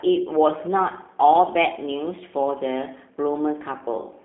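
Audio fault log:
Throughout, G.729 codec: speech confined to about 200 Hz–3.5 kHz, plainly rough and synthetic, as the 8 kbit/s coder rebuilds each frame from filter, pitch and sparse pulses.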